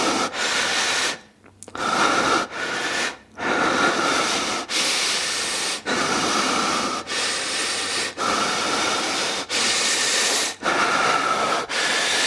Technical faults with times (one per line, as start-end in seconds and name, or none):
none